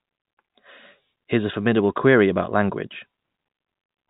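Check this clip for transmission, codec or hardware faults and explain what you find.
No transmission, codec or hardware faults turn up in the speech. The G.711 telephone coding can be heard in the narrow band, with nothing above 4 kHz, and at most a faint graininess that rises and falls with the level of the speech.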